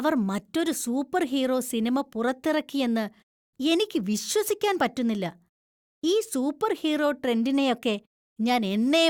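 No technical faults can be heard anywhere in the recording. The speech runs without any audible break, glitch or change in the signal.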